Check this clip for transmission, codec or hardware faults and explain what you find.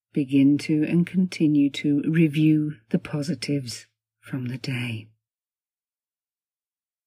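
No faults turn up when this clip is checked.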